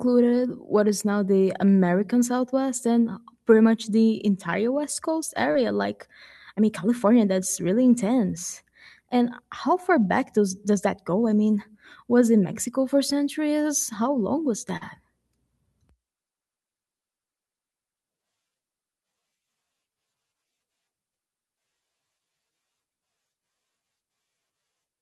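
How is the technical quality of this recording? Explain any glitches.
The speech has brief packet-loss damage at three points, each under a tenth of a second.

Lost packets rebuilt from error correction occur at 2.19–2.21 s, 5.55–5.61 s and 14.81–14.83 s. Low-bitrate backup copies replaced them, so the sound turns briefly rough and noisy.

Short concealed packet loss occurs at 5.51–5.57 s and at 14.77–14.83 s, just after "long was". About 40 ms went missing and was extrapolated from the preceding sound, which gives a short smear and shows as a smoothed, repetitive waveform patch.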